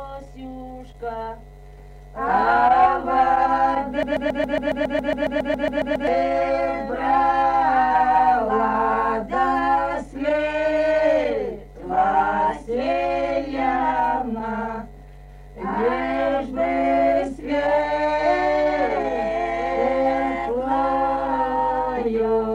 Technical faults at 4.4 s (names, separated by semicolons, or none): broken-record loop